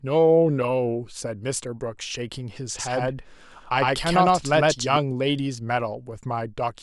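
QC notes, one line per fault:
2.79–4.97 s, doubled audio track: a dry copy trails about a tenth of a second behind at roughly equal level, cutting in and out abruptly, likely from a slower second capture path.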